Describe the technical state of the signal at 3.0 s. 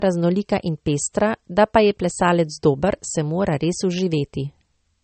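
At 3.0 s, like everywhere else in the clip, the speech has nothing above 8.4 kHz and sounds dull. That's likely low-bitrate audio saved at a high bitrate: an earlier MP3 pass, fitting something near 34 kbit/s, stripped the top, and the later high-bitrate encode can't bring it back.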